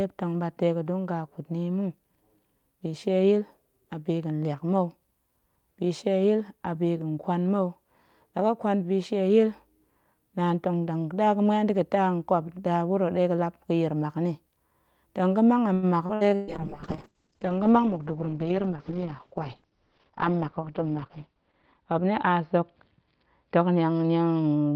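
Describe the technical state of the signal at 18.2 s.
At 18.2 s a call bitrate drop is in effect: from 16.45 s to the end, the encoder falls from 40 to 7 kbps and bandwidth narrows from 20 kHz to 6 kHz, leaving the speech coarse and muffled. A jitter buffer speed-up also runs from 17.78 to 18.46 s: to shrink excess buffered delay, the receiver trims pitch-period slices, about a tenth of a second in total, so the speech plays at 112% speed at unchanged pitch and sounds hurried.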